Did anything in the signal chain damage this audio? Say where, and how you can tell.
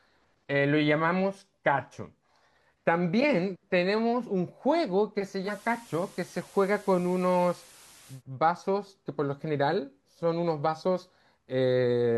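Yes. At the playback stage, the receiver shows digital radio blending to analogue from 5.43 to 8.23 s. A quick 118 ms cross-fade moves to the FM broadcast. Hiss appears, around 25 dB below the speech, and level drops about 1 dB. Then it blends back.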